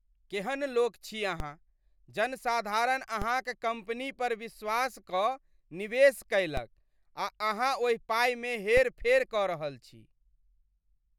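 DC steps hit at 1.4, 3.22 (just before "कम्पनी पर विश्वास"), 6.57 and 8.77 s (before "फेर कऽ रहल छी"). Each time the zero line jumps by about -21 dBFS and then fades away through a 20 Hz high-pass, so you hear a low thump under the speech.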